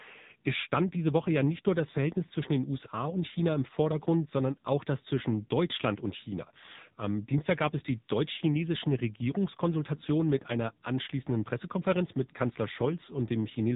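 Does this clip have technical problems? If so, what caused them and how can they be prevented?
Yes. AMR narrowband mobile codec damage runs throughout. Nothing above 3.8 kHz remains, and heavy buzzy, synthetic coloring suggests a low mode near 6.7 kbps. Prevent it by recording locally or using a wideband, higher-bitrate link.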